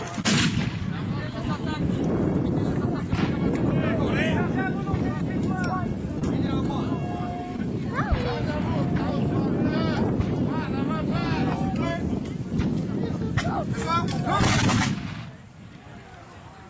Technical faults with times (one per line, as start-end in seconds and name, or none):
6.19-6.23 short concealed packet loss
7.56-7.60 short concealed packet loss